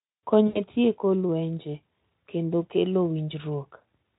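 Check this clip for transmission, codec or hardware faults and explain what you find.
One fault is present, a short dropout in the speech. VoIP packet loss concealed by the speech codec occurs from 0.47 to 0.61 s, just before "e tieko lwenje kendo". About 80 ms of packets went missing, which fits four 20 ms frames. The Speex decoder bridged the gap by extrapolating its last pitch and filter at steadily falling gain, so the sound smears into a fading buzzy tone or coloured noise before the speech resumes.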